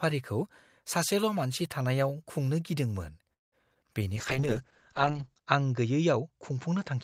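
A speech recording from a call, with three network-related faults in the space of a few seconds. At 3.33 s a call audio freeze begins, most likely because packets were held up in transit and the jitter buffer ran dry. The receiver has nothing new to play, so the last sound stretches briefly and then falls to near silence for about 180 ms. Speech resumes at 3.54 s, picking up where it stopped, so nothing is lost but a gap of roughly 0.19 s has been inserted. Shortly after, at 3.74 to 3.77 s, comes a short concealed packet loss. About 40 ms of audio never reached the decoder in time, and the receiver appears to have dropped part of it to catch up on the delay built during the freeze. Only a sliver of synthesized continuation covers the hole, so the sound gets a quick smear or wobble rather than a clean transition. From 4.18 s onward a call bitrate drop sets in. The bandwidth estimate collapsed and the encoder was pushed from 40 kbps down to 8 kbps, holding at that lowest rate for about 1.23 s. 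At 8 kbps the codec quantizes coarsely and narrows the audio band from about 20 kHz to 8 kHz, so the voice turns muffled and rough, losing its air.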